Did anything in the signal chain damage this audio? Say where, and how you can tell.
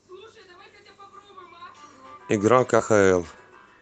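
Yes: short concealed packet loss at the network stage, 2.77–2.81 s. About 20 ms went missing, and the decoder continued the preceding sound, leaving a brief smear.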